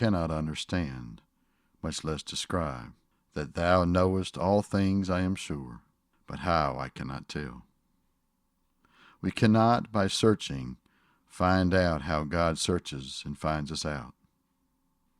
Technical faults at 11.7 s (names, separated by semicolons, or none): none